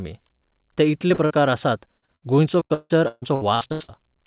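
It's a speech clip over a narrowband call line, nothing above 4 kHz, which fits G.711 A-law. Short concealed packet loss smears things briefly at 1.08–1.12, 1.14–1.20, 1.26–1.32, 1.98–2.04 and 2.06–2.10 s. Each time, 20–40 ms went missing and got patched by stretching the previous sound. At 2.16–2.24 s there's a burst of packet loss: about 60 ms drops out, the last sound is held and faded, and then the speech jumps ahead. From 2.60 to 3.90 s it's repeated packet loss with robotic sound: ten gaps, the longest 161 ms, patched so that roughly half that stretch is filled-in audio, which is why it sounds choppy.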